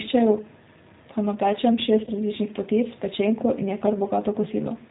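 Throughout, the speech sounds band-limited, slightly rough and synthetic, the plainly audible mark of the G.729 codec at 8 kbit/s, rebuilding sound from a filter, pitch predictor and sparse pulses. From 2.04 to 2.11 s, between "pa napečem" and "različnih potic pečenko", the sound smears into a brief fade. This is VoIP packet loss concealed by the speech codec: about 30 ms went missing, which fits a single lost packet, and the decoder extrapolated across the gap.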